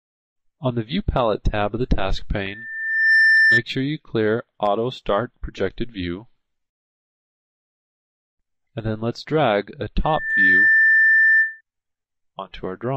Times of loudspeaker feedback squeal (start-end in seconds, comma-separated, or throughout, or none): 2.44-3.63, 10.04-11.61